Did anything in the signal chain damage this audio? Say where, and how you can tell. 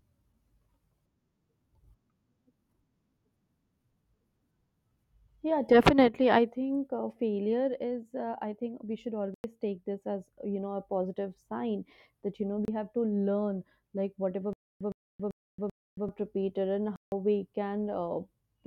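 Yes. Three blocks of digital silence break the speech: 9.34 to 9.44 s (98 ms), 12.65 to 12.68 s (29 ms) and 16.96 to 17.12 s (160 ms). At the driver or buffer stage, the output buffer went unfilled, so zeros replaced those samples.

From 14.53 to 16.09 s there is a stutter with silent gaps. The same 113 ms burst plays four times, each followed by about 276 ms of dead silence, repeating every 389 ms. The likely cause is a stalled stream at playback re-sending its last fragment, so the intervening audio is lost.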